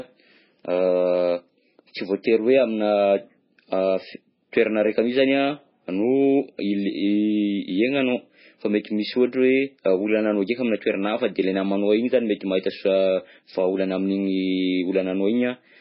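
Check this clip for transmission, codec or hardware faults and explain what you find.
One fault is present, lasting the whole clip.

MP3 compression, throughout: a starved encoder, likely MP3 at a bitrate near 16 kbps, discards everything above 5.6 kHz, leaving the speech dull and watery.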